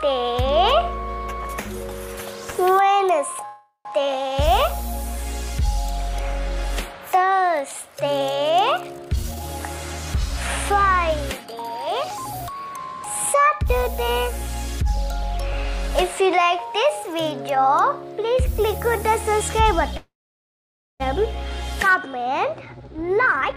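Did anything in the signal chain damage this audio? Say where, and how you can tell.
Yes. At the network stage, packets were likely held up so the jitter buffer ran dry, producing a call audio freeze at 3.45–3.87 s and 19.97–21.02 s. The last sound is stretched into a fading buzz, then near-silence (the second is mostly silent), before the audio resumes intact.

The jitter buffer then over-filled and the receiver cut out short pitch-period slices to shed delay, a jitter buffer speed-up. Audio runs faster at unchanged pitch: 157% at 9.02–9.44 s, mildly 105% at 10.72–11.87 s and 12.50–13.82 s, and 140% from 22.66 s to the end.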